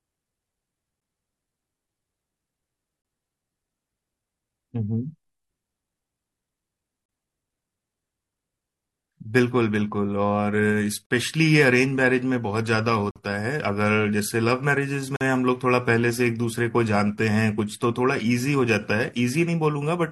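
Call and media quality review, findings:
Gap between stream segments: hard-edged silent holes at 1.00, 3.02, 7.06, 11.06, 13.11 and 15.16 s, 12 to 47 ms long, on 2-second segment boundaries. Segment timestamp mismatch padded with silence; speech resumes intact, unlike packet loss.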